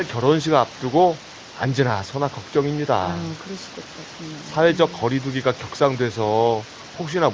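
No technical faults can be heard in this speech.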